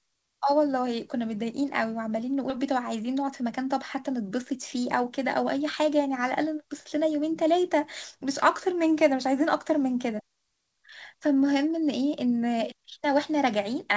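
At 2.50 to 2.57 s the speech makes a skip ahead. Roughly seven tenths of a second of audio never reaches playback, and the material on either side is joined almost directly, with only a few milliseconds of blending and no silence. That absence of a gap is what sets it apart from a dropout or concealment fill. The sound simply lurches forward, and part of the utterance vanishes without a pause to mark the spot.

From 3.08 to 3.59 s comes a jitter buffer speed-up. The receiver, holding more audio than it wanted, trimmed out tiny pitch-period slices in quick succession to shrink its delay, about a twentieth of a second in total. Playback runs at 108% speed while the pitch stays put, so the speech sounds briefly rushed rather than higher, unlike a resampling or clock-drift fault. Nothing is skipped outright, only compressed in time. The band above 8 kHz is absent throughout, as expected from the G.722 call path.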